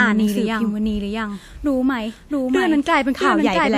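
Throughout the speech, every phrase is heard twice: an identical full-band copy trails about 0.7 seconds behind, at roughly the same loudness, with no decay or room colour. This doubled audio track likely comes from a second, slower capture path or an edit holding two copies out of step.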